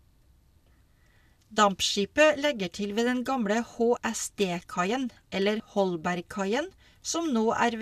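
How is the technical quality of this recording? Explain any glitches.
The recording has two short dropouts where compressed frames were skipped. At 3.96 s, just after "til ved den gamle", about 20 ms of audio is lost, and at 5.59 s roughly 50 ms is lost. Those amounts fit one and two frames of a 24 ms frame length. On a spectrogram, harmonic tracks jump abruptly, and the waveform shows a sudden shift in shape.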